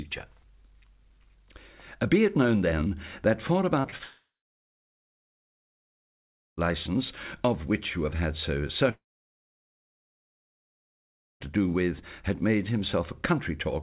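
Call audio, band-limited with nothing above 4 kHz, which fits a 64 kbps G.711 A-law call path. Just before 4 s, three brief smears or wobbles fall at 3.80–3.86 s, 3.90–3.94 s and 3.98–4.01 s. This is short concealed packet loss: about 40, 20 and 20 ms of audio failed to arrive in time, and the receiver extended the preceding sound to patch each gap before blending back. Right after, from 4.03 to 6.59 s, the last sound is stretched and fades out, giving way to roughly 2.3 s of silence, and a second gap from 8.91 to 11.42 s goes silent for about 2.4 s. Each time the audio resumes with about 2.5 s missing. The likely cause is a long network dropout, where concealment runs out and nothing is played.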